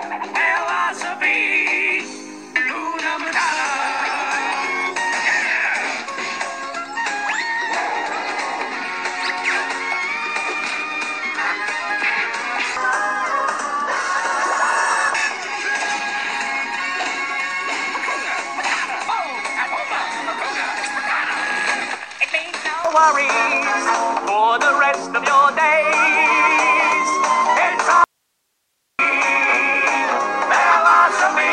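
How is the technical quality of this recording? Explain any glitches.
One glitch stands out near the end. From 28.04 to 28.99 s there is an audio dropout to a faint residue: the sound cuts out abruptly for about 950 ms, leaving only hiss roughly 50 dB below the signal. The likely cause is a brief signal loss while the downstream path stayed live. On a waveform it appears as a sudden near-flat gap, and on a spectrogram as a dark band with only faint broadband noise.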